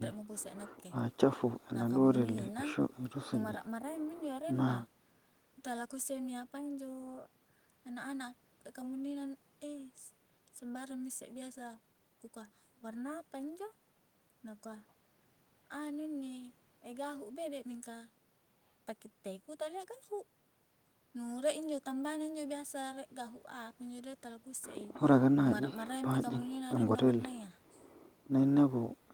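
No technical faults can be heard anywhere in this speech recording; the signal stays continuous and intact throughout.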